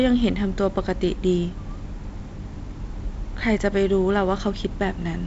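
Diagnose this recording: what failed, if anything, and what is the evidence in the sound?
Nothing stood out on listening to this speech, which carries the light upper-band hiss of G.722 wideband telephone coding with no content above about 7.7 kHz and the slightly noisier lower band that fits a 48 kbit/s mode.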